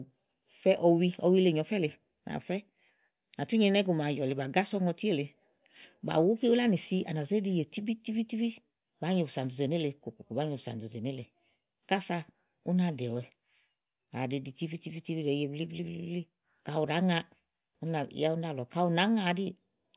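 No technical faults are audible anywhere in the speech recording.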